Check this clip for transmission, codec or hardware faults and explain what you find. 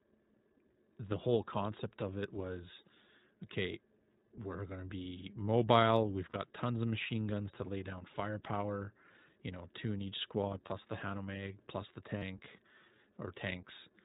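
Two faults are present: iLBC codec coloring across the whole speech clip, and three brief dropouts from lost iLBC frames.

The iLBC codec affects the entire clip. Each frame's excitation is coded on its own, and nothing above 4 kHz survives. The voice sounds band-limited, slightly rough and synthetic. The damage is plainly audible. The texture fits a rate near 15 kbps with 20 ms frames.

Lost iLBC frames occur at 6.30 to 6.36 s, just before "tons of machine guns", at 10.66 to 10.69 s, just after "two in each squad", and at 12.18 to 12.24 s, just after "plus the". The gaps last about 40, 20 and 40 ms. The decoder fills each one by repeating the last pitch cycle mixed with noise. This gives a short held, buzzy vowel. The voice recovers almost at once.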